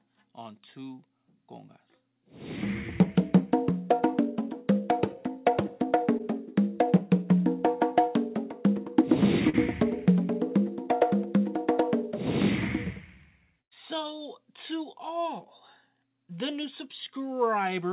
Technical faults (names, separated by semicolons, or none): short concealed packet loss; burst of packet loss